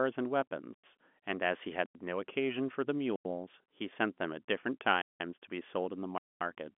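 Blocks of digital silence at 0.74, 1.86 and 3.16 s each last about 93 ms, and at 5.02 s one runs about 186 ms, which fits whole 4096-sample output buffers left unfilled in time and replaced with zeros. A final block at 6.18 s lasts about 230 ms. Each one cuts hard to dead silence and back without a fade, leaving a short hole in the narrowband telephone-limited speech.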